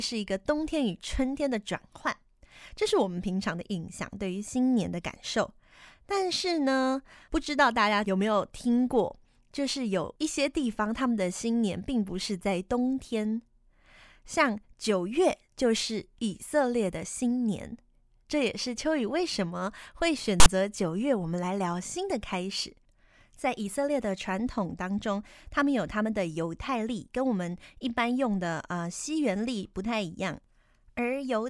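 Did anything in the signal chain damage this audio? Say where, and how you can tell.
Yes. Damage happened at the storage and file-reading stage: file tags were played as audio. At 20.40 to 20.46 s, about 60 ms of hard-edged rasp interrupts the speech. Text bytes read as samples sit off-centre, which separates this from symmetric white-noise decoder corruption.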